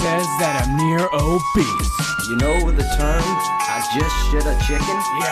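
No technical faults are audible anywhere in this recording.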